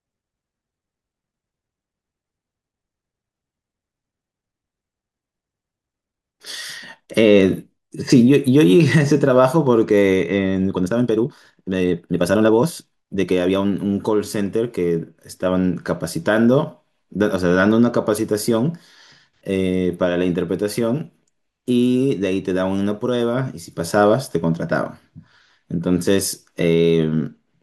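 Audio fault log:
10.66–13.72 s: time-stretched section. The speech abruptly runs 1.62 times faster, yet its pitch stays the same. It sounds rushed. This is likely software squeezing the passage to fit a set length, dropping short pieces to keep pitch.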